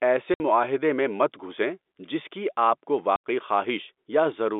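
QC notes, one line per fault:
0.34–0.40 s and 3.16–3.21 s, packet loss filled with silence: two hard dropouts of about 60 ms and 80 ms, the first just before "معاہدے میں مت گھسیں" and the second just after "جس کی آپ کو". The receiver played digital silence where audio was lost. The abrupt cut to silence and back leaves hard edges on each gap. Both lengths fit a 20 ms packet size, heard over a G.711 telephone band.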